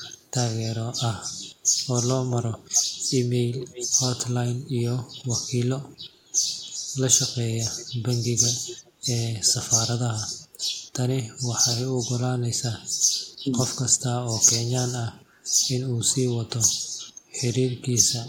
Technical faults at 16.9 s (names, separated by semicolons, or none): none